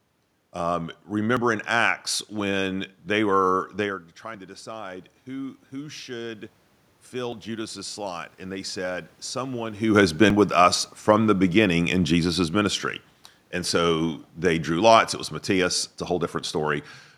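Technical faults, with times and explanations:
1.37 s, 7.32 s, 10.30 s, 16.26 s: audio missing between chunks. Each is a tiny jump where the sound skips forward with no gap, losing around 20 ms. The spacing falls on multiples of 3 s, likely from audio processed in 3-second chunks dropping a sliver at each handover.
3.84 to 6.60 s and 7.14 to 9.87 s: automatic gain rising. The talker moves away near 4.0 s and 9.5 s, and the input falls by about 14 dB. The voice and room noise swell together over a few seconds as the gain control climbs about 4 dB, then about 5 dB.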